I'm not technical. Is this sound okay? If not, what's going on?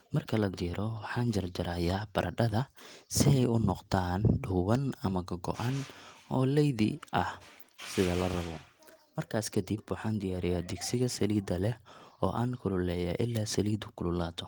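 Yes, nothing is wrong here.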